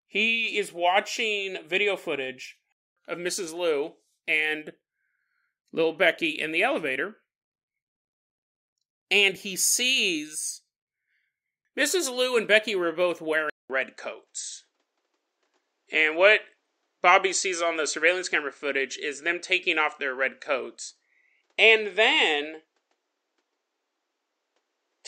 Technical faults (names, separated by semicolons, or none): input switched to a poorer device